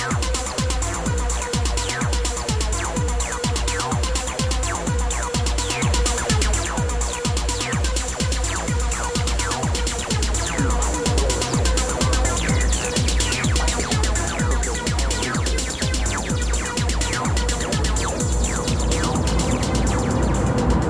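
No technical faults are audible anywhere here.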